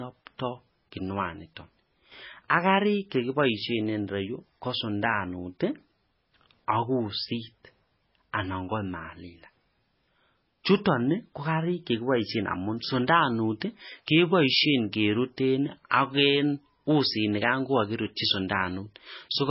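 Throughout, the speech has nothing above 5.6 kHz and sounds heavily watery and swirly, with chirping s sounds and smeared attacks. The likely cause is MP3 compression at a rate near 16 kbps, which cuts the treble and lets weak frequency lines flicker between frames.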